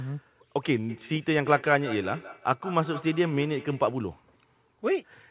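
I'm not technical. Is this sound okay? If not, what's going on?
No. From 0.89 to 4.01 seconds there is a feedback echo between two devices. Speech comes back about every 0.15 seconds, quieter and thinner. Two devices in one room share the call. One microphone hears the other's speaker, so the sound loops round.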